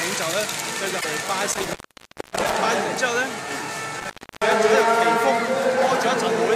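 At 0.97 s, a short stretch of damaged data in the compressed stream reaches the decoder. Bytes in the frames there are wrong, so the decoder misreads them, loses its place and has to hunt for the next valid frame header before it can lock on again. For about 0.08 s, until 1.05 s, the audio is briefly garbled.

From 1.52 s to 2.54 s, an intermittent contact opens the signal path, as a loose plug or cable would. The audio cuts out for about 0.6 s, with crackle at the moments the connection breaks and remakes, and faint hiss fills the gap. The same fault returns between 3.99 s and 4.52 s. This time the line stays open for about 0.32 s, and the drop is again framed by crackle at each edge.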